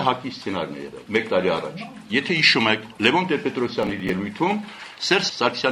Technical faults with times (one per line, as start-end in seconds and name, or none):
3.83-4.10 processor overload crackle